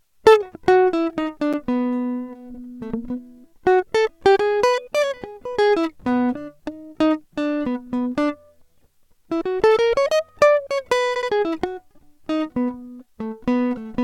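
At 1.53 s the music drops out for about 8 ms in a block of digital silence: a run of samples has been replaced by zeros, which most often means the output buffer wasn't filled in time. The cut is abrupt at both edges, so it sounds like a short tick or pop. On a waveform it shows as a flat line. On a spectrogram it is a thin empty vertical gap with a bright broadband stripe at each edge.

From 2.53 to 2.60 s there are repeated frames. A 70 ms stretch, which fits a run of three compressed frames, is played once more, so the passage stutters and the clip gains about 70 ms. The same fault returns at 11.15 to 11.29 s, where a 70 ms block plays two extra times and adds about 140 ms. On a spectrogram this appears as identical side-by-side slices. On a waveform the same shape repeats.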